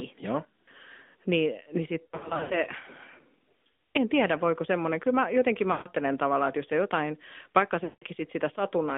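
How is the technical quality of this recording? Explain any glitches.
Technically it's rough: the whole thing has come through a narrowband mobile call, and there are three audible dropouts.

The AMR narrowband mobile codec colours everything. The audio sits in a telephone band of roughly 250 Hz to 3.6 kHz, so there's no real low end and nothing airy on top. The damage is plainly audible, a buzzy, somewhat synthetic edge that comes from rebuilding the signal from a vocal-tract model and a handful of pulses. That fits a mid-range AMR-NB mode, something like 10.2 kbps.

Then there are lost AMR speech frames at 2.07 to 2.68 s, 5.72 to 5.88 s and 7.84 to 8.04 s. Frames failed their checks over the radio link, so the decoder kept repeating its last good pitch and tract settings while turning the gain down. The first stretch is broken up: about 280 ms of loss spread across 440 ms, in runs no longer than 80 ms, so it warbles and dips. 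The later two are solid runs of 140 ms and 180 ms, which smear, fade toward silence and come back a bit weak and rough.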